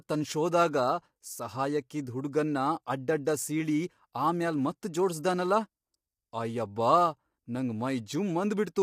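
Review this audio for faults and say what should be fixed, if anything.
The speech was most likely squeezed through low-delay AAC compression of the AAC-ELD type used for video calls, at a rate that fits about 32 kbps, across the whole clip. Its short frames cannot separate the voice's pitch harmonics cleanly and spend scarce bits on timing instead of detail, so the voice sounds plainly rough and grainy, with noise filling the gaps between harmonics and a thin, artificial-sounding upper band. Sending at a higher bitrate, or using a codec mode with longer frames when low delay isn't essential, would prevent this.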